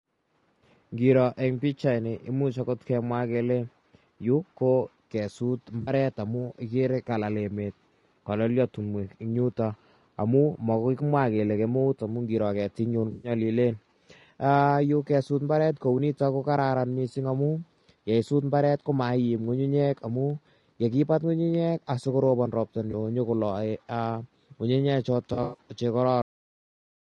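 Throughout the clip, the speech has been squeezed through what is likely a low-delay AAC codec such as AAC-ELD, at a bitrate around 32 kbps judging by the damage. Its short frames cannot resolve the voice's pitch harmonics finely at that rate, so noise fills the gaps between them and the top band is thinned and partly synthesised. The result is a plainly rough, grainy voice with an artificial sheen above the mid range.

At four points, AAC frame loss with concealment occurs. Whole coded frames never reach the decoder, which rebuilds the gap from the last good spectrum. From 5.81 to 5.91 s about 60 ms is missing, heard as a brief smeared, noisy blur. From 13.11 to 13.31 s the gap is 120 ms, long enough for the patch to sound phasey and washed out. A 20 ms loss at 22.91 to 22.94 s gives only a tiny smeared flicker. From 25.33 to 25.58 s about 140 ms is lost in scattered pieces over some 200 ms, the longest run roughly a tenth of a second, producing a smeared, noisy stretch.

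Finally, the clip has a cut-off end at 26.22 s. The last stretch of buffered audio was never written out, so playback halts mid-sound. The voice drops straight into digital silence with no natural decay, an abrupt chop rather than a fade.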